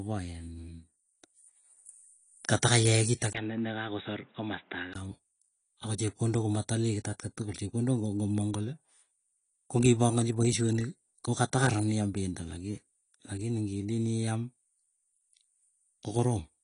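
All the way through, the speech sounds dull and smeared with a fizzy edge and nothing above 10.2 kHz, likely AAC compression at a low bitrate, around 32 kbps. From 3.33 to 4.95 s, after a 20 ms gap, it drops to a boxy band below 3.8 kHz, a few dB quieter with new background noise, likely an input switched to a poorer device.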